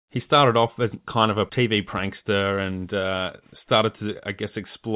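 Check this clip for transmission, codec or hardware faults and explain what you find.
No transmission, codec or hardware faults found; the speech runs through a narrowband call path that leaves nothing above 4 kHz, which fits G.711 mu-law telephony.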